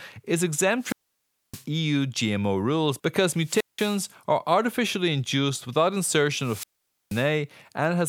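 At 0.79 to 1.65 s, after "rules because" at 3.32 to 4.07 s, and after "are artificially induced without" at 6.36 to 7.32 s, a wireless microphone squelch dropout occurs. The fading radio signal brings rising hiss before the receiver mutes for 0.61, 0.18 and 0.48 s. That hiss sets it apart from a clean digital gap.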